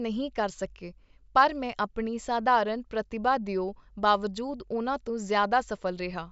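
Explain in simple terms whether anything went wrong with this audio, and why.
Nothing went wrong with this speech recording that a careful listener can pick out. At no point does anything break, stutter or change in a way that would point to a technical problem.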